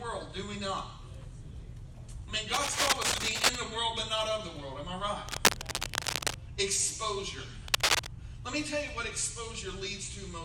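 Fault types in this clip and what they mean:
Cable scratch noise: bursts of dense, ragged scratching sit over the sound at 2.53–3.56 s, 5.28–6.35 s and a shorter, louder one at 7.68–8.07 s, all well above the programme level. It's likely a worn cable or connector being moved.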